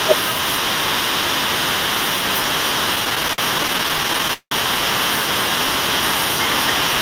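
From 2.95 to 4.53 s the speech suffers repeated stalls (stutter): packets arrived late, the jitter buffer kept emptying, and the receiver held the last sound 25 times, about 461 ms in all, the longest 181 ms, so roughly 29% drags. Spectrograms show frozen horizontal smears; waveforms show fading, repeated segments.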